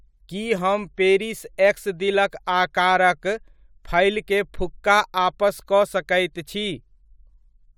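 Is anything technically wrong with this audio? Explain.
No, the speech signal holds steady throughout, with nothing in it pointing to a technical problem.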